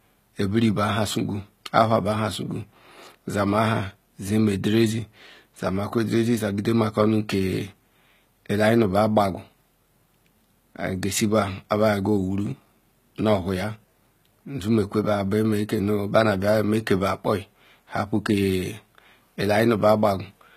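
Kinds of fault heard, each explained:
HE-AAC compression: plainly audible coding damage and nothing above 14.9 kHz, likely from treble rebuilt by band replication, fitting a low bitrate near 20 kbps.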